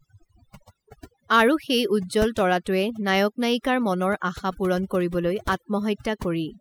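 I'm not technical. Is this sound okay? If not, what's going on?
No. This speech has overdone noise removal, running through the whole clip. A cleanup tool was set too aggressively: it switched off any slice of sound that resembled the background noise, and the quieter parts of the voice went with it. In the pauses the background drops and breaks up into twinkling, warbling specks. Plain muffling would simply dull the voice; here the gaps are unnaturally empty and sparkly.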